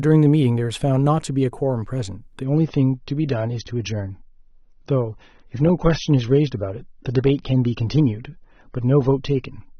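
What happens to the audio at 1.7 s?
Nothing goes wrong at 1.7 s; the speech carries on cleanly there, with no dropout, click or distortion.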